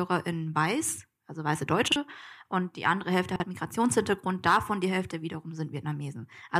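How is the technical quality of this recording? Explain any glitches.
The recording has two brief glitches, both chunks out of order in the speech. At 1.88 to 1.96 s, after "weiß also weiße" and before "und die andere", and again at 3.36 to 3.44 s, a 40 ms chunk plays one slot late, swapped with its neighbour. Each sounds like a jumbled moment, and on the waveform and spectrogram it shows as three abrupt discontinuities, vertical lines where the harmonics jump.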